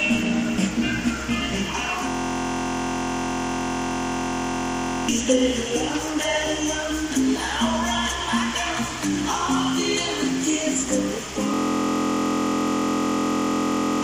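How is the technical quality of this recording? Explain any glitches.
The recording has two glitches, both a system hang loop. From 2.09 to 5.09 s and again from 11.54 to 14.03 s, the system froze while the sound hardware kept replaying its ring buffer. A 23.22 ms slice, which fits a 1024-sample buffer, repeats at 43.1 Hz and becomes a steady buzz, and about three seconds of the real audio is lost each time.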